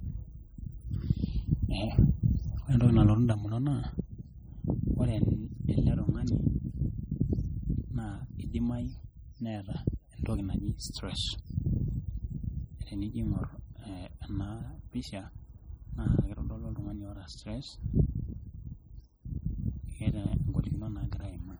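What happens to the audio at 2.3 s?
At 2.3 s you're hearing the same thing that runs through the whole clip: heavy damage that's likely MP3 compression at a starved bitrate, something like 32 kbps. The treble is cut off, and weak frequency lines flicker between frames, giving the speech a watery, swirly texture with smeared consonants.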